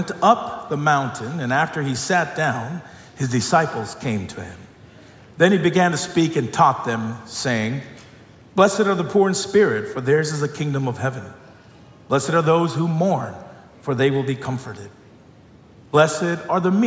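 No technical faults can be heard anywhere in the clip.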